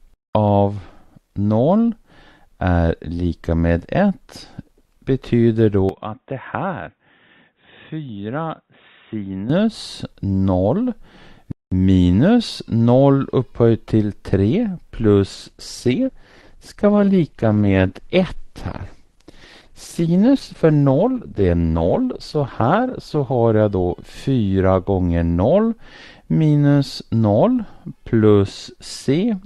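From 5.89 to 9.50 s the sound abruptly turns dull and boxy, with no gap at the changeover. Everything above 3.8 kHz vanishes, the level falls by roughly 10 dB, and a faint new noise floor appears far below the signal. The likely cause is an input switched to a poorer device. On a spectrogram this stretch shows a flat ceiling at 3.8 kHz, and the waveform envelope visibly shrinks for those 3.6 seconds.

From 15.35 to 23.35 s the treble thins. This is an adaptive stream at a lower bitrate: for eight seconds the playback fell back to a cheaper encoding, which fits a step down from around 64 to 16 kbit/s Opus. Content above 12.1 kHz is gone and codec smearing rises. Quality changes suddenly at both ends, with no gap. A spectrogram shows a hard cutoff at 12.1 kHz and blotchy, patchy high-frequency detail, while the waveform looks nearly unchanged.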